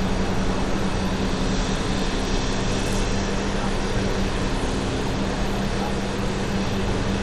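What we've got here is everyday sound, and the whole thing has a clear lid on the treble: nothing comes through above 14.4 kHz, and the upper detail that is left sounds grainy and unstable, with a gritty haze sitting on top. That's likely Bluetooth SBC compression. The codec starves the upper sub-bands of bits and quantises the rest coarsely, and the damage level fits a bitrate around 96 kbps.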